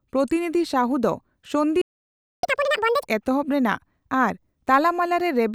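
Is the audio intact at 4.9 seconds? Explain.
Yes, the speech at 4.9 seconds plays through intact, with no audible fault at that moment.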